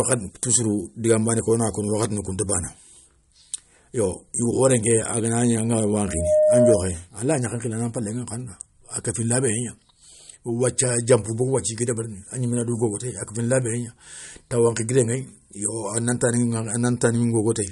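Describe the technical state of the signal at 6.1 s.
At 6.1 s a loudspeaker feedback squeal is under way. It runs from 6.05 s to 6.95 s. A microphone is picking up the loudspeaker it feeds. At 613 Hz the loop gain exceeds one, so that frequency reinforces itself on each pass. The tone takes roughly a third of a second to swell. It settles at roughly 5 dB above the speech. It is heard as a single sustained squeal over the talker.

The same moment also carries codec damage, which persists through the whole speech clip. Nothing is present above 11.2 kHz, so the treble is cut off sharply. The damage is plainly audible. When bits run short, the encoder discards weaker frequency detail from frame to frame. That leaves a watery, smeared texture. The likely cause is MP3 compression at a low bitrate, one that fits about 48 kbps.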